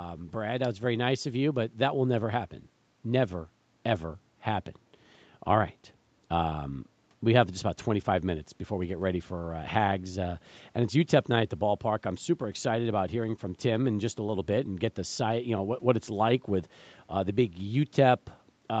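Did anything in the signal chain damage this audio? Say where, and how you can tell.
No, nothing in the chain stood out as damaging on listening; the speech carries the expected traits of a call path, with the microphone processing and the Opus call codec both leaving nothing above 8 kHz, and no point in the audio calls for a diagnosis.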